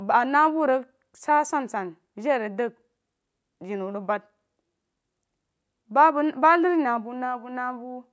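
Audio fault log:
No faults are present in this speech recording. It has passed through a call's microphone processing, which leaves nothing above 8 kHz.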